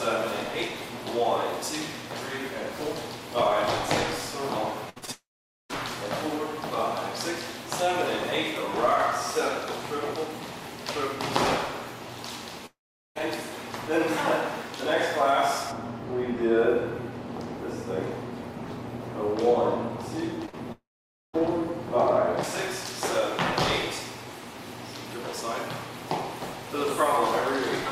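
From 4.89 to 5.74 s there is repeated packet loss with a robotic quality: four short holes, the longest 65 ms, each patched by stretching the preceding sound, so about 120 ms of audio is lost and the passage turns choppy. Inside that stretch, from 5.12 to 5.71 s, the sound continues as a fading buzz and then drops to about 460 ms of silence before resuming with roughly 580 ms missing, likely a long network dropout. The same pattern returns from 12.66 to 13.17 s, a decaying tail followed by about 410 ms of silence, with about 500 ms never heard.

From 15.72 to 22.43 s the treble falls away smoothly, about 11 dB down at 10 kHz relative to 1 kHz, which is de-emphasis applied wrongly. A treble cut meant to undo pre-emphasis was applied where it did not belong, leaving the audio dull and muffled.

Within that muffled stretch, between 20.46 and 21.43 s, scattered short gaps appear: around three small holes, the longest roughly 40 ms, smoothed over by repeating the last sound, giving brief ticks and hiccups with about 60 ms missing. 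Overlapping them, from 20.72 to 21.35 s, the sound fades into about 520 ms of silence and comes back with around 620 ms gone, likely another long network dropout.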